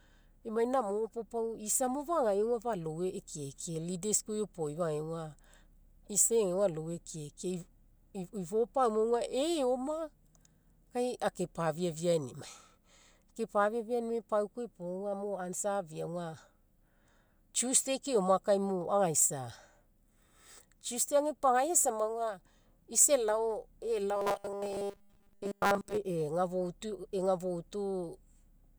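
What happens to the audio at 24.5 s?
At 24.5 s you're inside a stretch of robotic sound from repeated short buffers, running from about 24.16 to 25.98 s. The speech collapses into a stiff, metallic buzz fixed at 200 Hz, likely because new audio arrived too slowly and most of that stretch was filled by replaying a tiny 5 ms slice over and over.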